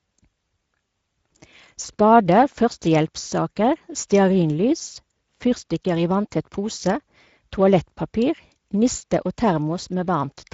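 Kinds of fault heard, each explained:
Speex codec: The speech has the grainy, hoarse edge of a CELP codec that is short on bits for the excitation signal, so the damage is plainly audible: a noisy roughness rides on the speech, which fits a wideband Speex setting near 17 kbps. Nothing sounds above 7.6 kHz. A plain low-pass filter would only dull the top, and MP3-style coding would add swirling, watery artefacts. Here the harshness sits inside the speech itself.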